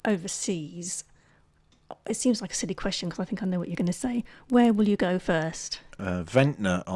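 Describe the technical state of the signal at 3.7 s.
At 3.7 s, as throughout the speech, the resampler restarted on every block, which fits a 48 kHz to 24 kHz conversion. Each 50 ms block's edges lack real neighbouring samples, so small errors land every block, heard as a 20 Hz ticking buzz under the speech.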